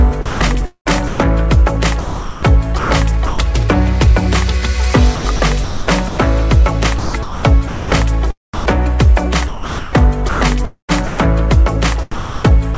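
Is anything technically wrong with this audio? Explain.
Yes. The audio is chopped by the voice detector six times: 0.09–1.20 s, 2.01–3.39 s, 5.16–6.18 s, 6.99–7.92 s, 8.54–11.19 s and 12.11–12.77 s. Within each stretch, about 0.37 to 1.05 s of sound drops to comfort noise. The likely cause is a sender-side detector repeatedly switching transmission off. The result is choppy. The call path's bandwidth stops at 8 kHz, which fits G.722.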